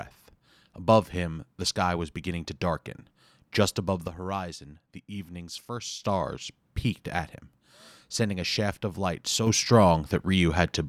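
A sudden gain jump at 4.08 s drops the speech and its background noise together by about 8 dB, and at 6.03 s the level snaps back up. A second jump at 9.47 s raises everything by about 6 dB until the end. Each change happens in one step with no fade in or out. The likely cause is a digital gain setting applied instantly rather than ramped smoothly over time.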